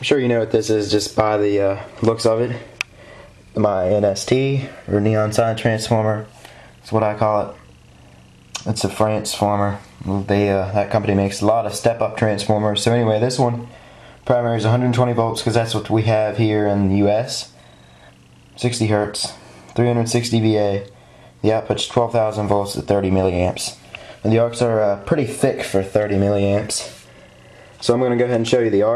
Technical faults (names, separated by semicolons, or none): none